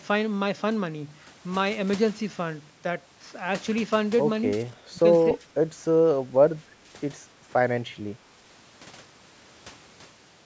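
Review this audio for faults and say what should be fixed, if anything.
Between 4.9 and 7.52 s the speech briefly dips in short bursts, each under about a tenth of a second, at 4.9, 5.38, 5.88, 6.33, 6.79 and 7.45 s. The deepest, at 4.9 s, drops about 20 dB; the others drop about 5 to 10 dB. This is likely speech suppressed in double talk: while both sides spoke, the echo canceller mistook the talker for loudspeaker echo and turned the signal down. Better double-talk detection in the canceller, or a headset that keeps loudspeaker echo out of the microphone, would prevent it.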